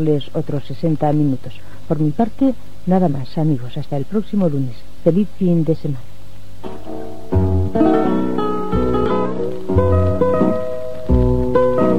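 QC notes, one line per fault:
9.06–9.11 s, damaged data in a compressed stream: a brief disruption about 50 ms long. Corrupted bytes made the decoder misread those frames and lose sync, so it jumped ahead to the next valid frame header.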